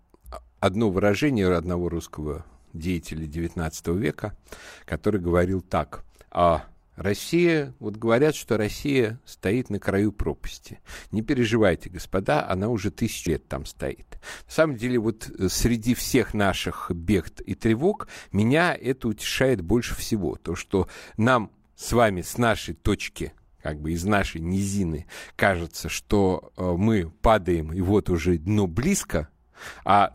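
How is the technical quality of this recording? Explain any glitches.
The recording has one glitch. Damaged data in a compressed stream appears at 13.26 s, right after "переживайте господа она уже". A corrupted stretch of the encoded file throws the decoder out of sync until it locks onto the next valid frame, producing a brief glitch.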